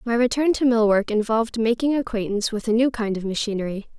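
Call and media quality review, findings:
No audible faults found in this speech recording.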